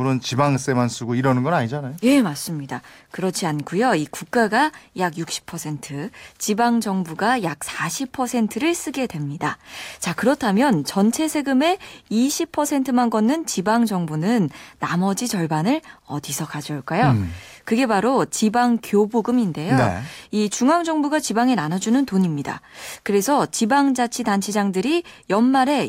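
No technical faults can be heard anywhere in the recording.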